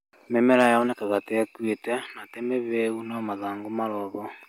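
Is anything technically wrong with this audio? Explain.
Yes, there's a short burst of hard clipping between about 0.52 and 0.67 s. For that stretch the speech got pushed roughly 2 dB past what the chain could pass, so the loudest peaks were sliced off flat instead of rounding over. Those squared-off tops throw extra harmonics high up the spectrum. Since the overload is small, you hear a brief crackly edge on the peaks rather than a constant fuzz.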